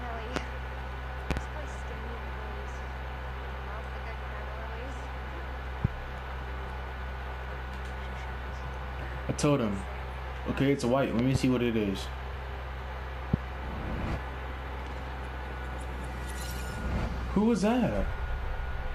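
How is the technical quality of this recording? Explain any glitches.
The recording is marred by loud pops, five events in all: single pops at 0.36 to 0.39 s, 5.85 to 5.88 s and 13.34 to 13.36 s, and double pops at 1.31 to 1.40 s and 11.19 to 11.38 s. A sudden voltage step or pulse, likely from a plug, switch, static discharge or driver glitch, is being added to the signal. The audio chain then shapes it into a sharp transient that stands roughly 20 dB above the surrounding sound, which continues underneath each pop.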